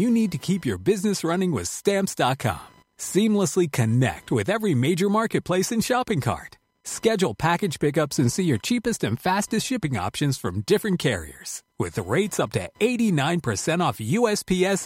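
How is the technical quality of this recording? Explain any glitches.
The recording carries a persistent interference fault: computer activity noise runs underneath the speech from start to finish. It is a faint buzzing, chirping texture with a pulse rate of roughly 1 kHz, sitting about 35 dB below the speech. Changing load in the computer's processor, graphics hardware or mouse shifts the ground reference that the audio circuitry shares, so that electrical activity leaks into the signal. Because it follows the machine's workload rather than the talker, the noise flickers and scratches independently of pauses and phrasing in the speech.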